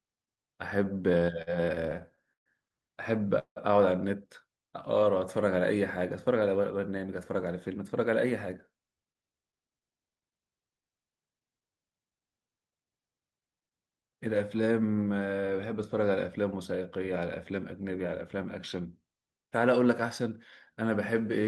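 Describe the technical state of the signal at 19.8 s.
At 19.8 s the speech signal is intact, with no dropout, glitch or other fault, only the ordinary coding character of the call path it came through.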